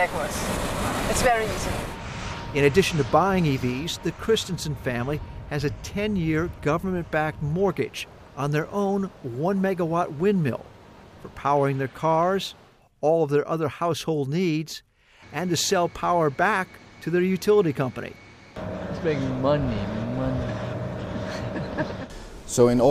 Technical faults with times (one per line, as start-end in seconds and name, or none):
none